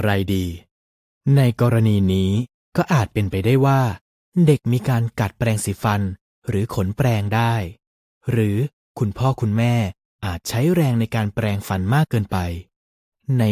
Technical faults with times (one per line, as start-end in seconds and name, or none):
none